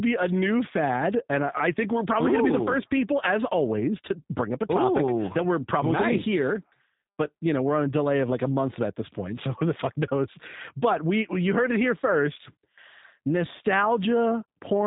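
Speech throughout shows plainly audible G.729 codec damage: nothing above 3.8 kHz survives, and the voice sounds rough and synthetic, which fits an 8 kbit/s G.729A stream. Unlike simple band-limiting or G.711 telephony, the roughness comes from parametric reconstruction, not just missing treble.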